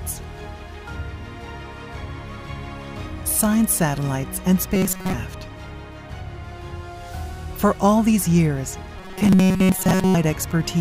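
Audio arrives too seldom at two points, likely leaving the player to loop a short buffer of about 5.3 ms. This produces robotic sound from repeated short buffers from 4.75 to 5.14 s and 8.99 to 10.15 s: most of the audio is skipped, and a rigid 188 Hz buzz replaces it.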